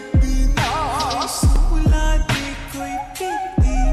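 At 1.56 s there is a block of digital silence lasting about 1.33 ms, which fits a 64-sample buffer left unfilled. The audio drops straight to silence and returns with no fade, so the two edges merge into a single sharp tick.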